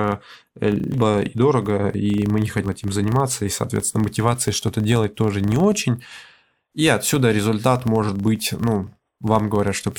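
A speech recording with two faults. The first runs through the whole clip: a filter restarted on every block. A filter in the chain loses its memory at each block boundary and starts again from silence. Each restart leaves a small transient. These repeat 25 times a second and form a low buzz at 25 Hz. The buzz rises and falls with the level of the speech. The second fault is compressed frames skipped, heard three times. At 0.91 to 0.95 s and again at 2.63 to 2.67 s, about three frames are lost. That drops roughly 150 ms of speech each time. At 6.39 to 6.41 s, about one frame goes, roughly 50 ms. The frames were missing or rejected by the decoder as damaged. Each frame lasts 46.4 ms, so the audio jumps ahead in whole-frame steps.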